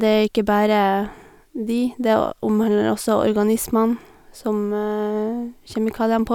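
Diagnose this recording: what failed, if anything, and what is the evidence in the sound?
No fault found anywhere.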